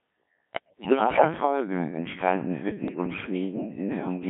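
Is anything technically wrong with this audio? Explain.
Yes. Throughout, the speech has passed through a Codec 2 vocoder at what sounds like a very low rate, around 1.3 kbit/s, limited to about 150 Hz to 3.5 kHz. Only pitch, voicing, energy and spectral shape survive, so the voice is resynthesised from sine waves and sounds heavily robotic and buzzy.

Bit errors on digital voice radio strike from 0.53 to 1.24 s, with roughly one bit in ten flipped, and again from 2.88 to 3.26 s at a slightly lower rate. Corrupted frame parameters make the voice lurch in pitch and loudness and dissolve into warbling, bleeping gibberish.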